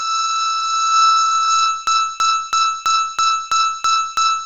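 From the start the music sounds dull and grainy, with nothing above 7.7 kHz and a breathy hiss where the upper detail should be. This is likely Bluetooth LC3 compression at a very low rate, around 16 kbps with 10 ms frames, zeroing the treble and filling it with noise.

At 1.87 s the music locks into a broken-record loop: a 0.33 s fragment repeats exactly, back to back, eight times until the clip ends. The likely cause is a stalled player or stream resending its last buffered piece, so the music that should follow is lost.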